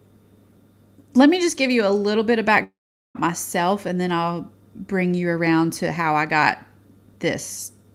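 From 2.63 to 3.17 s, after "little bit of", the speech decays into a short fading buzz, then about 0.42 s of near silence. It resumes at "myself and then I'll" with half a second gone, likely a long network dropout concealed by extending the last sound.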